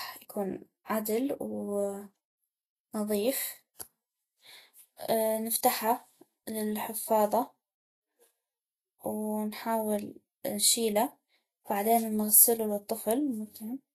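Throughout the speech, the treble is grainy and hissy, and nothing is present above 14.2 kHz. This is most likely Vorbis compression at a low setting, consistent with a bitrate near 27 kbps. The codec keeps a smooth spectral outline but quantises the high-frequency detail so coarsely that fine structure turns into noise of similar energy. The damage is plainly audible: voiced tones sound roughened, and onsets lose their crispness.

Pre-echo appears twice, from 0.85 to 0.90 s and from 3.74 to 3.80 s, spreading over about 51 and 56 ms. In each case a sharp speech onset falls late in a transform block. The quantisation noise sized for that loud onset is spread across the whole block, including the quiet stretch before it. Each attack is therefore preceded by a brief smear of hiss, and the onset itself sounds soft rather than clean.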